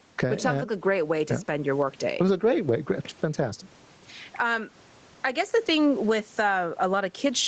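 Throughout the speech, the sound is squashed, and loud and quiet passages sit unnaturally close in level. This is gain pumping, likely from input gain set far too high and a fast limiter or compressor clamping down on each peak, swinging the level by around 10 dB.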